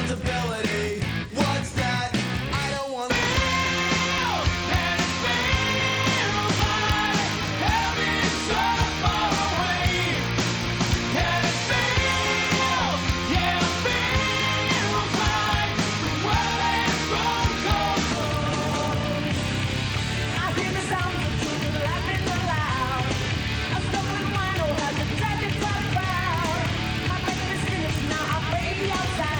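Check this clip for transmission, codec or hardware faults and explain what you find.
One fault is present throughout the clip. A steady buzz at about 43.1 Hz runs from start to finish, and the sound plays about 0.1 percent slow at normal pitch. This is a block size mismatch (padded). One stage writes blocks slightly shorter than the next stage reads, which fits a 1024-sample read block. The shortfall in each block is filled with silence, so a tiny gap repeats at the block rate and heard together those gaps form the buzz.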